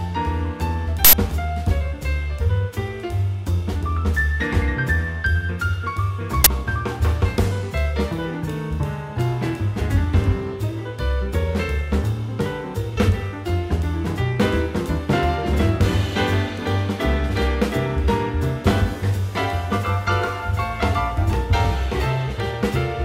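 Two uninitialised buffer bursts occur, at 1.05–1.13 s and 6.44–6.46 s, where blocks were played before any audio was written, so stale memory came out as a loud crack or burst of digital noise. The lengths fit 4096- and 1024-sample blocks. On a spectrogram each is a broadband vertical slab; the waveform shows abrupt chunks.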